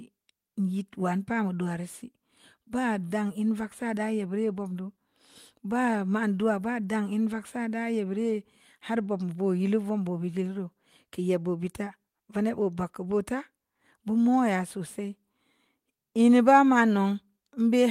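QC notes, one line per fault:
No problems turned up on this one; it's good to go as far as QC is concerned.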